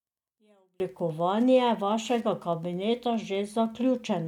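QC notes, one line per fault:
Throughout: Wi-Fi interference, steady ticking every 102.4 ms, about ten per second, roughly 35 dB below the speech, from a nearby radio's beacons being rectified.
0.0–0.8 s: one channel inverted. Speech drops by about 37 dB to a faint residue, likely reversed polarity cancelling centred content in the mono sum.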